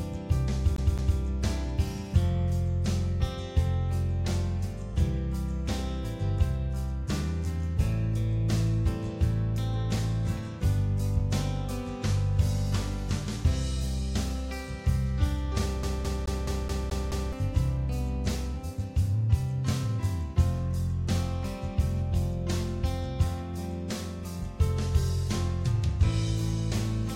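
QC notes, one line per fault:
0.76–1.19 s, CD stuck on one turn: the same 0.21 s chunk plays twice with a tiny mute at each jump, so you get a quick, even stutter. That's a scratch bouncing the laser back one track on each turn of the disc.
15.83–17.33 s, CD stuck on one turn: same thing, same 0.21 s loop, but it hangs on for seven repeats, so the skipping-disc stutter runs much longer here.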